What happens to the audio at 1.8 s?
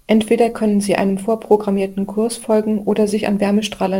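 At 1.8 s, as throughout the clip, the converter suffers sample clock jitter: its clock wanders by a few microseconds, so samples land early or late, roughly 30 dB below the speech. Steep, loud and bright moments pick up a fine hiss that vanishes in pauses.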